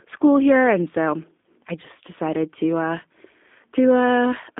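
A speech clip that sounds thin, muffled and plainly rough and synthetic throughout, with nothing above 3.5 kHz or below about 200 Hz. This is G.729 codec damage: speech rebuilt from a vocal-tract filter, pitch predictor and a few pulses per frame, consistent with an 8 kbit/s stream.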